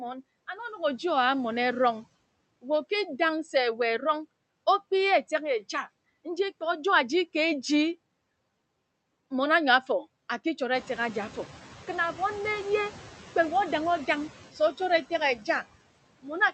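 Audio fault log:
throughout: noise suppressor artifacts. Frame by frame, the suppressor pulls down every band it judges to be steady noise by about 20 dB, so the background sinks in the pauses and rises again under the speech.
10.73–11.50 s: noise suppressor catching up. The room noise jumps by about 12 dB at around 10.5 s, and the suppressor's noise estimate lags behind, at first cutting only about 6 dB. Over 770 ms the estimate adapts and the background sinks again.
15.37–15.48 s: speech cut by the noise suppressor. The suppressor mistakes part of the speech for noise and turns it down along with the background, by about 8 dB at the deepest point and for about a tenth of a second, so that stretch sounds swallowed and faint.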